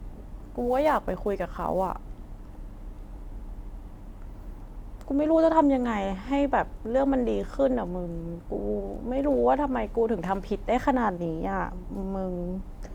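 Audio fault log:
0.00–3.64 s, sample clock jitter: the converter's timing wanders by several microseconds, so each sample is captured a little early or late and the error tracks how steeply the waveform is moving. The result is a grainy hiss bound to the speech itself, sitting roughly 30 dB below the signal, strongest on loud passages and sibilant, high-frequency sounds and dropping away in pauses, until the clock settles after 3.64 s.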